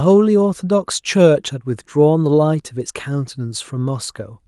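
No technical faults are audible anywhere in the recording.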